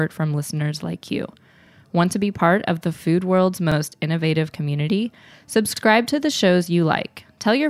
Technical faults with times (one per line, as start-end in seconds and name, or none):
1.67-1.72 overlapping chunks
3.72-3.77 overlapping chunks
5.77-5.82 overlapping chunks